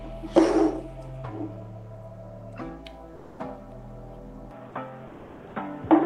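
From 3.15 to 3.39 s, the real background is replaced by comfort noise, most likely from discontinuous transmission in the Opus call codec, which stopped sending during the pause. About a quarter of a second of ambience turns into a steady, featureless hiss about 2 dB quieter than before. On a spectrogram the textured background sitting about 23 dB below the loud parts becomes a smooth, uniform wash, and the waveform shows a flat, even noise floor.

At 4.51 s the input switches to a poorer device, likely a headset call profile or another microphone, and stays there to the end. The sound turns dull and boxy with no gap at the changeover and roughly the same level. The spectrogram shows a hard ceiling at 3.8 kHz where the call codec's band had reached about 12 kHz, and a new noise floor appears well below the signal.

From 5.07 to 5.55 s, comfort noise again stands in for the background, this time for about half a second with no change in level. 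The spectrogram shows the same smooth, detail-free band in place of the ambience, now confined beneath the narrower 3.8 kHz ceiling.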